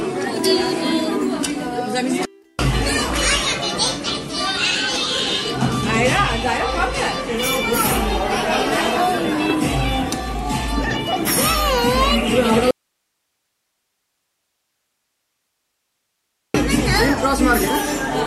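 At 12.71 s the audio drops out abruptly to a faint residue, leaving only low hiss at around 55 dB below the normal level for about 3.8 s until 16.54 s. The likely cause is a lost signal feed while the downstream path stayed live.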